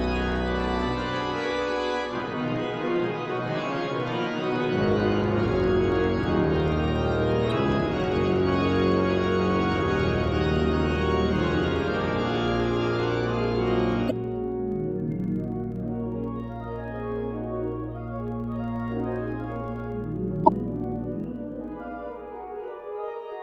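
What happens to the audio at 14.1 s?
Damaged data in the compressed stream corrupts the decode from 14.07 to 14.12 s. The decoder misreads the broken frames, loses sync and hunts for the next valid frame header, so the sound breaks into a brief chirp, squawk, click or short hole.

Underneath this, as across the whole clip, a filter restarted on every block begins each block from silence. Each new block starts with a small transient, which sounds like a 25 Hz buzz of regular ticks that rises and falls with the signal's level.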